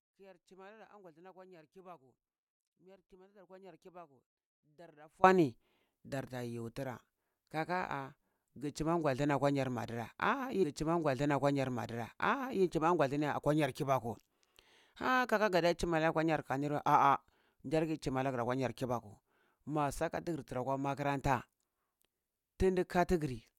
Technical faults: one channel inverted; stream segment repeated

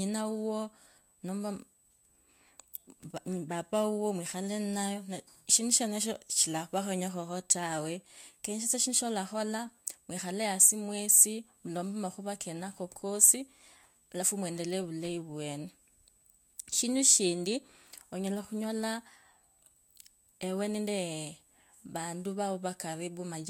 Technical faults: USB whine

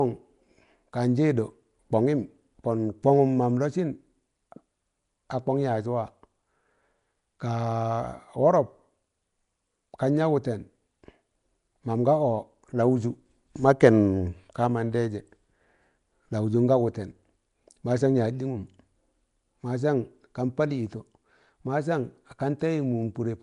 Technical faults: Nellymoser compression

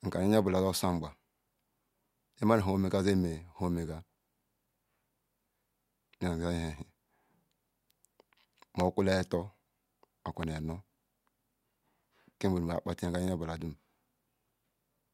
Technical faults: loud pop

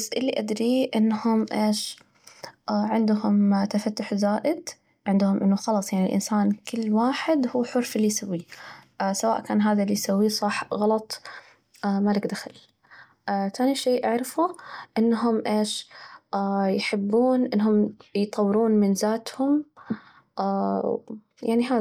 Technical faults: none

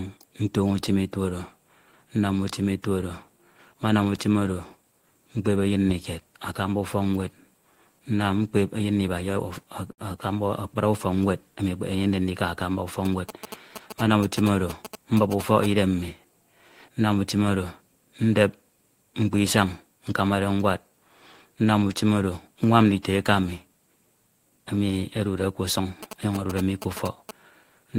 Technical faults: short stall from a late packet; GSM signalling bursts

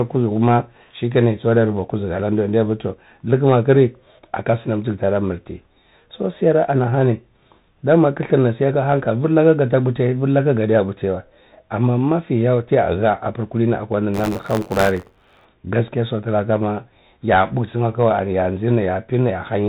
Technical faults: Bluetooth CVSD headset codec; buffer tearing

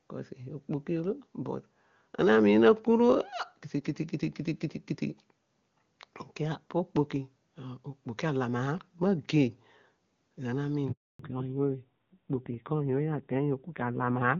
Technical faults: handover gap; fallback to narrowband

